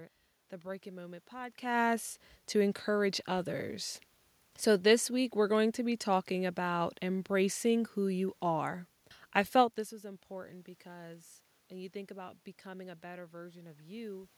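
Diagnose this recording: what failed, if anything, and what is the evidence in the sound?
Nothing failed: no stage of the chain shows a fault in the sound.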